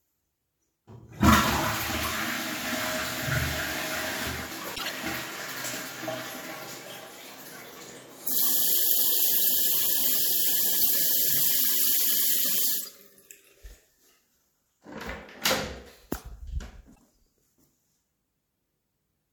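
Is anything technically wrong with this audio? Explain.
Yes. Corrupt frame decoded at 4.75–4.91 s, 10.81–10.87 s, 12.78–12.88 s and 16.95–16.97 s: damaged compressed frames were decoded and played anyway, which misplaced energy across frequencies and produced brief chirps and noise bursts. On a spectrogram these show as short, frame-wide smears of stray energy; on the waveform they appear as brief jagged bursts. The 10.8 s burst is loudest, and the one near 17 s is faint.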